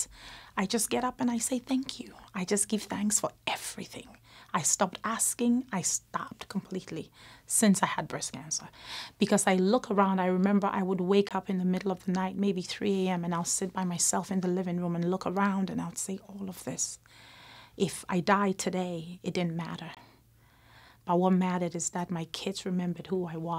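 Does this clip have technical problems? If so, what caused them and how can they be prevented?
Yes, there are two blocks of digital silence, at 11.29 to 11.31 s and 19.95 to 19.97 s, each about 21 ms long. The audio drops straight to silence and back with no fade. That length fits a 1024-sample buffer the program didn't fill in time. To prevent it, give the audio thread more headroom with a larger buffer or lighter processing so every block is delivered before its deadline.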